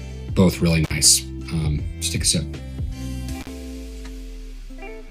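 At 0.84 s and again at 3.41 s the sound breaks off for about 54 ms and 46 ms. This is intermittent contact, a loose plug or cable opening for an instant. Crackle marks each edge, seen as vertical broadband streaks bracketing a near-empty gap in the waveform.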